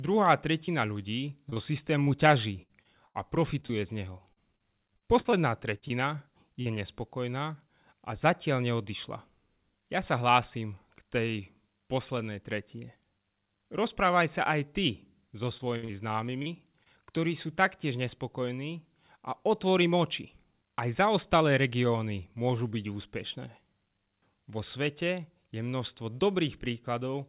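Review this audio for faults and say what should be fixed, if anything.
Short concealed packet loss occurs twice: at 0.66–0.70 s, where about 20 ms of audio never arrived in time, and at 6.62–6.68 s, just before "nespokojná a zatiaľ neodišla", where about 40 ms went missing. The receiver patched each hole by extending the preceding sound, so both moments come through as a quick smear or wobble.

Repeated packet loss (robotic sound) affects three stretches: 1.50–3.71 s with eight gaps (longest 80 ms), 4.33–5.92 s with eight gaps (longest 52 ms), and 15.58–16.87 s, between "aj ty so" and "ktorí sú taktiež nespokojní", with five gaps (longest 50 ms). Packets kept arriving late or not at all, and roughly 12 to 16 percent of each stretch had to be filled in by concealment, which makes the sound choppy, with pieces dropping out. Throughout, the call path cuts everything above 4 kHz, which points to a G.711 mu-law link at 64 kbps.

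Reducing network loss and jitter, and adding forward error correction or a larger adaptive jitter buffer, would prevent these dropouts.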